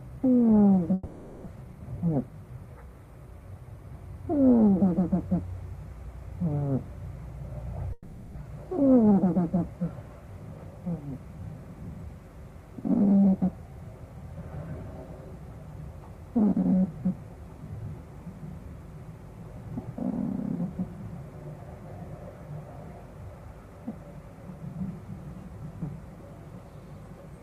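From 0.93 to 1.48 s there is a long network dropout, likely caused by packets failing to arrive. The receiver stretches the last sound into a fading buzz for about 530 ms and 400 ms of audio is lost. On a spectrogram the last spectrum smears into flat horizontal bands, and the waveform decays without new detail. There is no stretch of true silence.

From 1.55 to 2.58 s a jitter buffer speed-up follows. Short pitch-period pieces are cut to drain the excess delay, about a tenth of a second in all, so the audio runs at 110% speed and sounds hurried without any change in pitch. Events sit closer together on the spectrogram while harmonic spacing stays the same.

From 7.93 to 8.39 s a second long network dropout, likely from the same kind of missing packets, fills about 440 ms with a decaying buzz, and 400 ms is lost. It shows the same smeared, fading bands.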